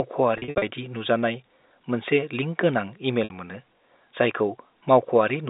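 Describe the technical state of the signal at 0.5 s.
At 0.5 s the signal is inside a stretch of packet loss with pitch repetition running from 0.38 to 0.62 s, just before "नुजानाय मोनसे लिंक गोनां". About 180 ms of audio is missing across those 240 ms, in gaps of up to 60 ms, which fits 20 ms packets. The receiver fills each gap by repeating the last pitch cycle, so the sound holds with a buzzy, droning sustain, and the longest gaps fade into silence before the speech returns.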